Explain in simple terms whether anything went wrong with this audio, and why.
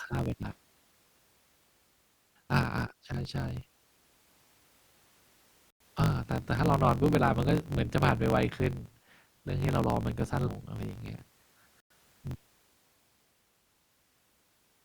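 A low buzz runs under the whole recording, and the speech plays about 1.12 times too fast. This is a block size mismatch: each block gets its end cut off, which fits a 1024-sample read.

The speech jumps ahead at 0.51, 7.77 and 10.47 seconds. These are compressed frames skipped: chunks of about a tenth of a second, or one 20 ms frame at 7.77, were never played.

There are 100 ms silences from 5.70 to 5.80 and from 11.80 to 11.90 seconds. This is a gap between chunks: pieces about 6 seconds long were joined with empty space between them.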